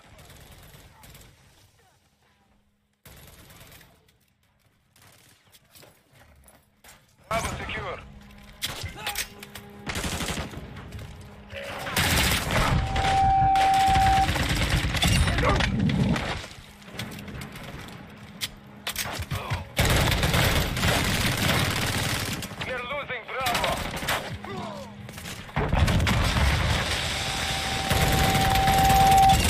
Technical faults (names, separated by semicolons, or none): one channel inverted; loudspeaker feedback squeal